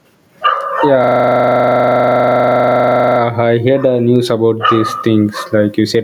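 Gain pumping runs through the whole speech clip. The gain swings by about 10 dB. The likely cause is gain set far too high, with a fast limiter clamping each peak.

From 1.04 to 3.2 s there is a system hang loop. A 40 ms piece of audio repeats exactly, 25 times a second, giving a rough, rattling buzz. The hardware kept replaying one buffer while the system froze. Little or no audio is lost.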